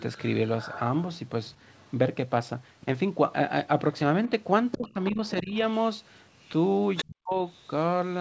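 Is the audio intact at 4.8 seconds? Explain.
No. From 4.26 to 5.68 s the other side's voice is leaking through, a second talker sitting about 15 dB below the main speech. It is likely loudspeaker playback that the echo canceller failed to fully subtract from the microphone signal.

Inside that span, from 4.76 to 5.54 s, the speech is suppressed in double talk: the main voice drops in pieces by as much as roughly 20 dB, about 0.4 s in total. This is likely the canceller attenuating everything while both sides spoke at once.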